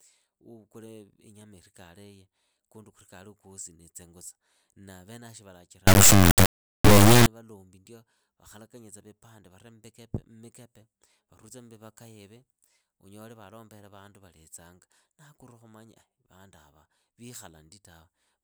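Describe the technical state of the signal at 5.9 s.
At 5.9 s the speech is inside an integer read as float fault running from 5.87 to 7.26 s, between "venavo shi" and "ndio vakhalakanye tsa vipande". Samples stored as 32-bit integers are interpreted as 32-bit floats, so the output slams between silence and the clipping limit: a harsh, deafening square-wave buzz. The waveform shows flat-topped rails, and the spectrogram a dense, bright broadband smear.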